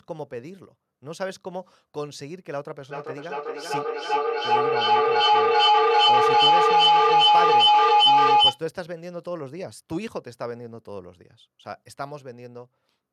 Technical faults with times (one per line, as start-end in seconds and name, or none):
2.91-8.63 feedback howl